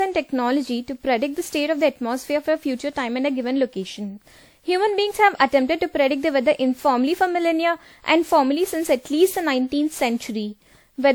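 Throughout, the speech sounds swirly, hollow and smeared, with blurred attacks: generation loss, likely from about seven passes through 96 kbit/s WMA encoding.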